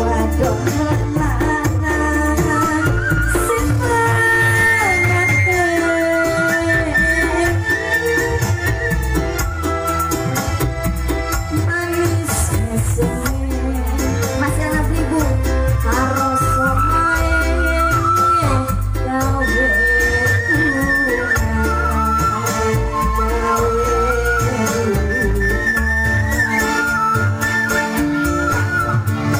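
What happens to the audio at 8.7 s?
Nothing goes wrong at 8.7 s; the audio carries straight through that moment without any dropout, glitch or distortion.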